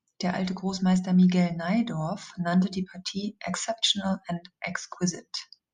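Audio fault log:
4.76–4.91 s, one channel drops out: a sudden 0.14 s dip of about 6 dB, likely one stereo channel lost before the mono sum; the waveform steps down abruptly and the spectrogram dims evenly across all frequencies.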